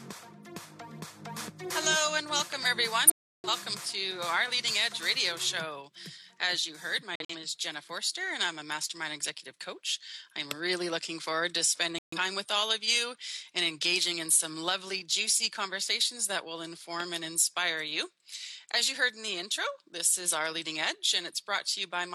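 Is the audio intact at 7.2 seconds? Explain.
No. From 7.14 to 7.35 s the sound stops dead, a corrupt frame muted fault. Damaged compressed frames were rejected by the decoder, and the player filled the gap with silence. The 0.21 s hole fits several consecutive frames being discarded. The cut is abrupt, with no fade or smoothed concealment, and timing is preserved: the audio resumes exactly where it should, with nothing skipped or delayed. That rules out a buffer stall or dropped-sample glitch.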